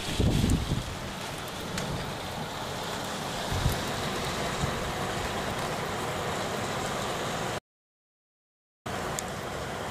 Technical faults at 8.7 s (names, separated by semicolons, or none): audio dropout to silence